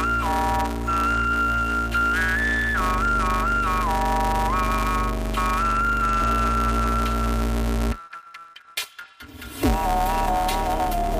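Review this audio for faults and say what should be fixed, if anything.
Throughout, planar audio read as interleaved: 5.8 ms left-then-right blocks, fitting 256 samples, replay as pairs, giving a robotic 172 Hz buzz, not an octave jump. Prevent it by making the player's declared sample layout match the planar format the decoder actually outputs.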